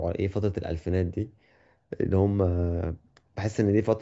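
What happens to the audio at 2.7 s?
Nothing goes wrong at 2.7 s: the speech there plays through intact, with no dropout, click or distortion.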